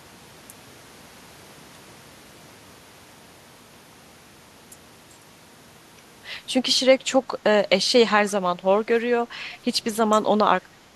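Around 8.42 to 8.86 s, 10.07 to 10.25 s, and from 10.61 s to the end, the speech dips, shallowly at first, then by roughly 20 dB, then shallowly again. That's likely speech suppressed in double talk, with the echo canceller ducking the talker alongside the far end.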